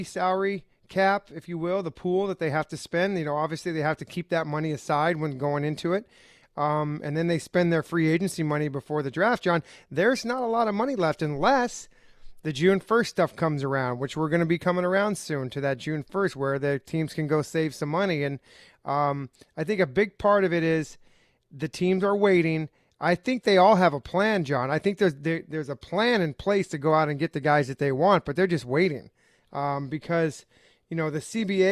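A speech recording with no audible technical fault. Nothing at any point in the clip points to a problem with how the sound was captured or delivered.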